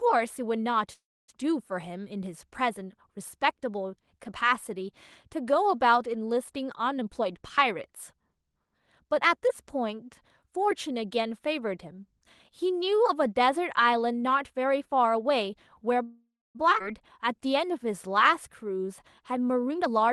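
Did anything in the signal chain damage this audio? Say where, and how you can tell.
Yes. The damage happened in the network and jitter-buffer stage of a call path.

Between 0.93 and 1.30 s, and again between 16.03 and 16.57 s, the last sound carries on as a fading buzz and then goes silent for about a quarter second. The audio then resumes exactly where it stopped. This is a call audio freeze, likely caused by late packets emptying the jitter buffer. It differs from a dropout because nothing is lost; a 0.35 s and a 0.52 s gap are simply inserted.

From 6.98 to 9.05 s the speech runs at 117% speed, and from 19.66 to 20.12 s it runs at 146%. Both times the pitch stays unchanged. This is jitter buffer speed-up: short pitch-period pieces are cut repeatedly, removing roughly 0.4 s and 0.2 s of audio. A clock or sample-rate error would shift the pitch as well.

At 16.8 s the playback jumps forward, and roughly 0.3 s of speech is missing. 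The two sides are joined with almost no gap. This is a skip ahead, where a stretch of audio was dropped while later audio was already waiting. Unlike the freeze, real content disappears rather than being postponed.

From 17.36 to 19.61 s the speech runs at 94% speed with its pitch intact, and sounds are drawn out. This is jitter buffer slow-down: repeating single pitch periods added about 0.13 s to rebuild reserve. Its steady stretching differs from a freeze's abrupt held buzz.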